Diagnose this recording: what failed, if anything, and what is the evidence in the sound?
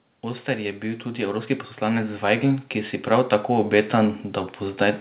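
The failure is in call processing: automatic gain rising. From 0.45 s to 4.23 s the speech and the background noise swell together by about 11 dB. The control judged the input too quiet and raised its gain slowly, lifting everything at once within the narrowband sound, which is cut off above 4 kHz.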